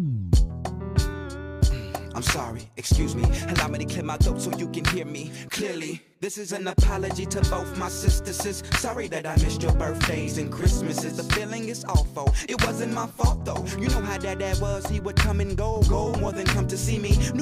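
Nothing in the audio stood out as a technical problem on listening.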